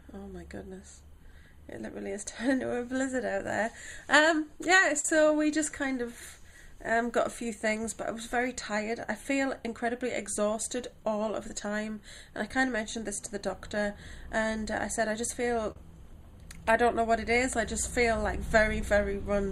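Short concealed packet loss occurs at 1.31 s, from 5.00 to 5.05 s, from 15.72 to 15.76 s, and at 18.81 s. Each time, between one and four hundredths of a second failed to arrive. The decoder extended the preceding sound to bridge the gap, heard as a brief smear or wobble.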